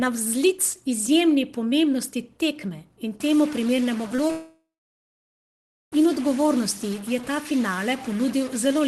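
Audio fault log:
3.2 s to the end: stuck bit. Right after "izjemni pomembnosti tekme in" a noisy distortion lands on everything and stays, with hiss filling the gaps. That's most likely one converter or data bit jammed, knocking about half the samples off by a fixed step.
4.15–4.19 s and 4.28–4.30 s: short concealed packet loss. Two tiny holes of roughly 30 ms and 10 ms where packets arrived too late. The decoder stretched the preceding sound to cover them, so you get a quick smear or wobble rather than a gap.
4.31–5.93 s: long network dropout. About 1.6 s of audio never arrived, most likely a network stall. The decoder carries the last sound briefly as a fading buzz or hiss, then about 1.3 s of near-silence follows before the audio resumes, with that stretch simply gone. Underneath, the Opus call path at 24 kbps tops out around 12 kHz.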